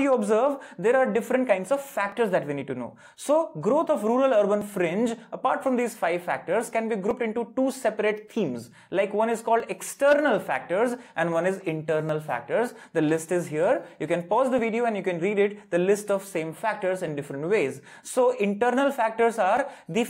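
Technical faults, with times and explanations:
2.12, 4.62, 7.11, 9.60 and 12.09 s: audio missing between chunks. Tiny skips recur every 2.5 s, each dropping just a few milliseconds with the two sides butted together. That's likely a chunked recorder losing a sliver at every handover.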